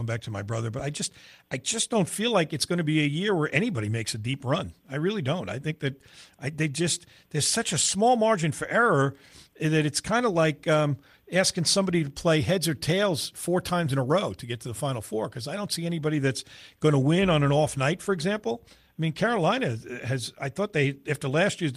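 Throughout the speech, clock drift between sender and receiver is audible: the sender's clock runs roughly 5 percent fast, so the receiving buffer keeps overfilling rather than draining into dropouts. From 0.09 s to 21.70 s, repeated timing corrections trim short pieces at uneven intervals, all in one direction. Unlike random packet loss, they leave no gaps, only slight hiccups and an unsteady, faintly hurried tempo.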